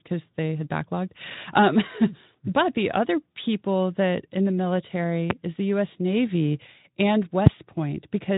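Loud pops break into this speech clip twice, at 5.30 to 5.33 s, just before "is the", and at 7.46 to 7.49 s. Each is a single sharp click, roughly 20 and 25 dB above the speech, while the speech continues underneath. The likely cause is an electrical step or brief pulse, such as a switch, static discharge or driver glitch, entering the signal chain. The circuits downstream shape that pulse into the short pop, which lasts about 30 ms here. The audio is narrowband Speex, with nothing above 3.8 kHz.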